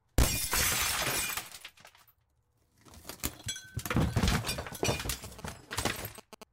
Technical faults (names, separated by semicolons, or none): GSM signalling bursts